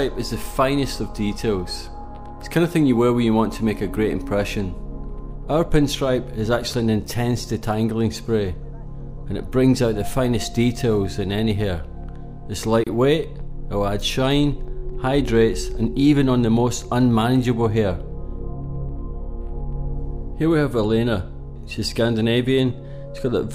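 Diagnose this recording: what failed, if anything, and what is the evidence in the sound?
Codec stage: a gap at a join of encoded pieces at 12.84 s. About 29 ms of silence, smeared edges. Leftover encoder delay and padding remain.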